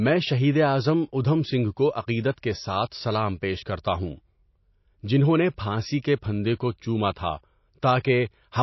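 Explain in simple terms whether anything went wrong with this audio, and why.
Something did go wrong. The whole clip carries MP3 compression damage, and the treble stops sharply around 5.8 kHz. The speech sounds dull and plainly watery, and s sounds lose their crispness. The likely cause is an encoder squeezing the file too hard and discarding detail.

There is also pre-echo from 8.0 to 8.04 s. For about 44 ms, a short hiss comes just before a sharp sound. The encoder spread its noise across a whole chunk of audio, so that noise leaks ahead of the attack and softens it.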